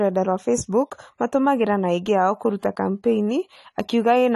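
AAC compression, throughout: the speech stops dead at 12.1 kHz and sounds dull and smeared, likely from AAC-LC quantising hard at a low bitrate near 32 kbps.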